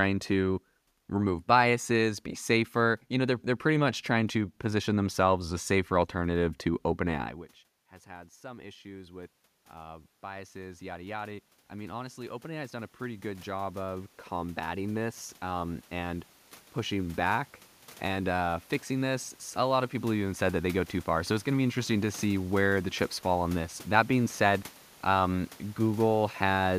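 At about 7 s the talker moves away, and the voice drops by about 22 dB. From 8.04 to 17.28 s, automatic gain rising follows. The gain control slowly climbs by about 17 dB. Voice and room noise swell together.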